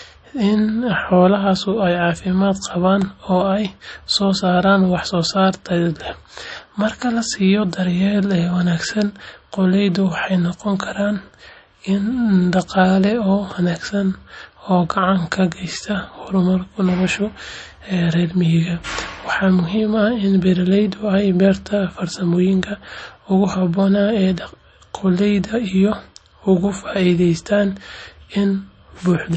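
MP3 compression, running through the whole speech clip, is the likely cause of the damage heard here. Nothing survives above 8.3 kHz, so the sound is dull and sibilants lose their edge. Short of bits, the encoder has discarded weak frequency lines, and these flicker in and out from frame to frame, giving a plainly audible watery swirl, chirpy s sounds and smeared consonant onsets. That degree of damage fits a bitrate in the low thirties of kbps.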